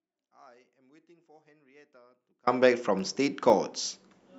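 From the start until 2.47 s the speech sits in an audio dropout to a faint residue, likely a lost signal on a live path, leaving only a faint trace about 35 dB down: a near-flat waveform and a dim spectrogram. Between 2.99 and 3.75 s come four CD scratch ticks, the longest about 2 milliseconds, where unrecoverable data was patched, showing as thin vertical lines on the spectrogram.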